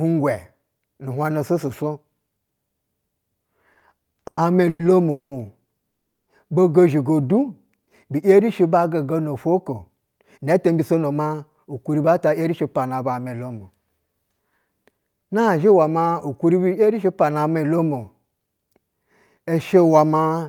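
From 3.73 to 5.33 s the speech stutters through ten brief holds, the longest 200 ms. These repeated stalls (stutter) come from packets arriving late, so the jitter buffer kept running dry.

At 5.89 s the sound stops dead for 370 ms of silence before resuming at 6.28 s. This call audio freeze likely reflects packets held up in transit, adding 370 ms of delay.

Between 7.21 and 7.90 s the speech drags to 88% speed at unchanged pitch. This jitter buffer slow-down repeated pitch periods, adding 94 ms to rebuild a depleted reserve.

From 9.62 to 13.51 s the speech hurries at 109% speed, losing roughly a third of a second, and again from 16.79 to 17.39 s at 108%, losing only a sliver. Both are jitter buffer speed-up: the receiver trimmed pitch periods to shed excess buffered delay.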